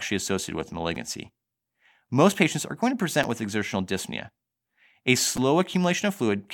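At 0.95 s, after "associated with", a repeated buffer occurs. New audio arrived late, so a 5.8 ms block, fitting a 256-sample buffer, played twice more. At 3.23 s, after "patients are going to", it repeats once. At 5.37 s, twice. Each is a click or brief buzz.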